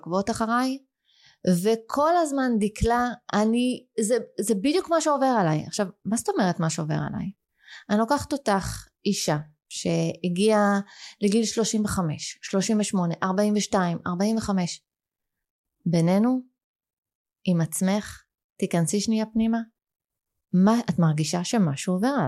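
A speech recording, with nothing technically wrong with it.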